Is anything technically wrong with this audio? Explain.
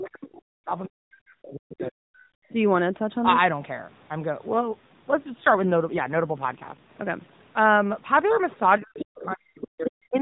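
Yes. There are three kinds of fault, all heard over a narrowband mobile call path whose AMR-NB coding is light at its normal 12.2 kbps.

Speech suppressed in double talk occurs from the start to 0.69 s, from 0.86 to 2.23 s, and from 8.8 s to the end. The talker's level sinks by as much as around 40 dB in pieces. The likely cause is an echo canceller that cannot separate the near talker from loudspeaker echo while both sides speak, so it attenuates both. A network dropout would leave clean gaps. Here the level dips partially and comes back, in step with the other voice.

The other side's voice leaking through appears from 0.08 to 0.28 s, from 1.79 to 1.89 s, from 8.74 to 9.28 s, and briefly at 10.17 s. A second voice sits under the talker. It is faint in the earliest and last scraps and becomes fairly strong around 9 s. This is likely residual loudspeaker echo the canceller failed to remove. 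Unlike crosstalk from a neighbouring line, it appears only around the stretches where the talker is being suppressed.

An AMR rate drop runs from 4.46 to 6.91 s. The codec steps down from 12.2 to 5.9 kbps, as happens when a weak radio link trades speech bits for error protection. The bandwidth stays the same and nothing drops out, but the speech turns buzzier and more synthetic, then recovers. That steady roughness without gaps or a duller band distinguishes it from packet loss or a switch to a narrower codec.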